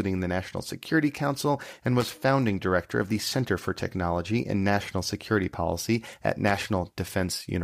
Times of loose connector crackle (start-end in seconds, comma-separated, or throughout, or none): 2.00-2.18, 6.47-6.56